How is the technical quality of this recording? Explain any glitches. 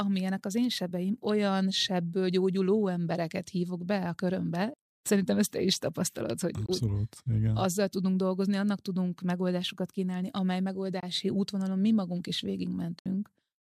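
The recording has three short gaps in the sound, most likely Bluetooth dropouts. At 6.66 to 6.69 s and again at 11.00 to 11.03 s, the sound cuts to silence for about 21 ms, which fits a single packet failing to reach the headphones in time. At 12.99 to 13.06 s, a longer 64 ms hole fits roughly three lost packets in a row. After each gap, the sound picks up as though it had continued playing underneath.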